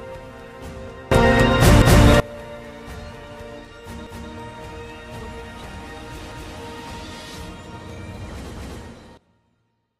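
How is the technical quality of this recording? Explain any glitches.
The recording has two clear problem types: abrupt level jumps and a repeating stutter.

A sudden gain jump of about +24 dB hits at 1.12 s and lasts until 2.2 s. Sound and noise floor rise together instantly, with no ramp, likely from a gain setting applied in one step. A second jump, of about -16 dB, arrives at 9.17 s and holds to the end.

Overlapping chunks cause stutters at 1.82, 4.07, 6.32 and 8.57 s. Each 2-second chunk starts 250 ms early, so that slice plays twice at every join.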